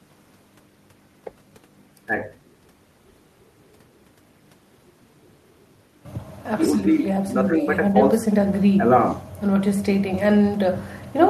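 Listening through this speech recording, nothing stood out as a technical problem.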